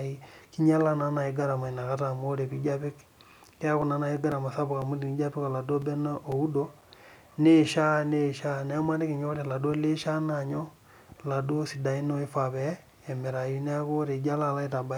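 From 3.32 s to 7.32 s the speech is broken by periodic USB or driver dropouts. Something on the system stalls the USB bus or the audio driver every 0.5 s. Each time, a few milliseconds of audio go missing and are replaced by silence. That happens about ten times across the span. The gaps are too short to hear as pauses. Instead they come through as small, evenly spaced ticks riding on the speech.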